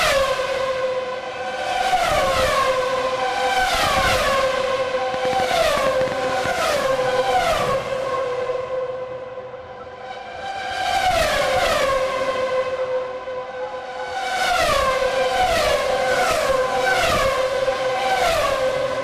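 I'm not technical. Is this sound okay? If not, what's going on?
No. Between 5.14 and 6.78 seconds there is a train of clicks. Something, likely electrical interference from nearby equipment or a faulty connection or power supply, pushed a burst of sharp pulses into the recording. You hear around fifteen quick ticks or pops in that stretch, close to nine each second but unevenly spaced, and they stand out clearly above the sound itself before stopping.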